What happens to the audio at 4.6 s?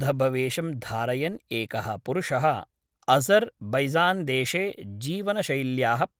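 Nothing goes wrong at 4.6 s: the speech there carries on intact, with only the light coloration of the Opus voice compression that runs through the whole clip.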